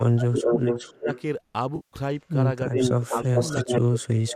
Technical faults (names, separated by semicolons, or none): speech suppressed in double talk; echo leak; AAC frame loss with concealment